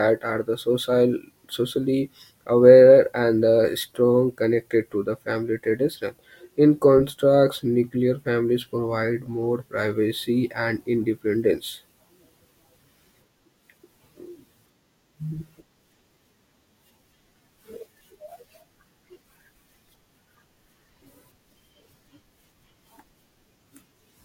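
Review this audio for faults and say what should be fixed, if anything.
No faults turn up in this audio, so nothing needs to be fixed.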